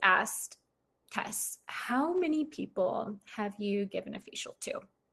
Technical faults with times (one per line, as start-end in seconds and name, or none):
4.13-4.27 lost packet rebuilt from error correction